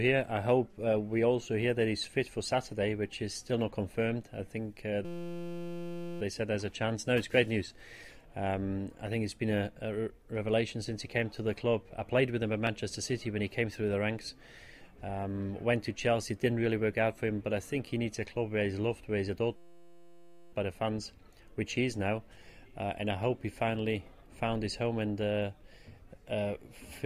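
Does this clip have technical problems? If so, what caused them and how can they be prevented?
Yes, there are two kinds of fault here.

First, dropped samples at 2.04, 11.12 and 12.67 s. Each is a single sharp click where the waveform suddenly jumps ahead, likely because a fraction of a millisecond of audio went missing from the stream. A bigger buffer and a less loaded recording machine should stop these.

Second, a system hang loop from 5.05 to 6.21 s and again from 19.56 to 20.53 s. The machine froze while the audio hardware kept replaying one 5.8 ms chunk, which fits a 256-sample buffer, so it comes out as a steady 172 Hz buzz. Updating or changing the audio driver should fix those stalls.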